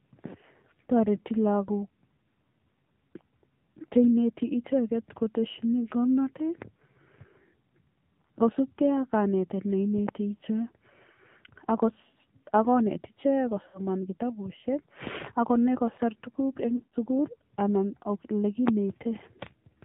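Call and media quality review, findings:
AMR narrowband mobile codec, whole clip. Speech is band-limited, nothing above 4 kHz, with a buzzy, synthetic edge. The vocal-tract model is being fed too few pulses per subframe. The plainly audible damage fits a low AMR-NB mode, around 7.4 kbps. Mobile leg, narrowband path.

Lost AMR speech frames, 13.68–13.81 s, right before "kitabushek ak konai kosir". Brief smeared warble, about 60 ms gone, consistent with three dropped 20 ms frames. The decoder is concealing by repeating the last pitch and envelope with decaying gain. Radio link.

Lost AMR speech frames, 16.76–16.94 s, between "konai kosir tuguk en" and "sugul anan ole". Stretched, fading stutter. About 120 ms lost, scattered over 160 ms, longest gap 80 ms. Same radio-error cause.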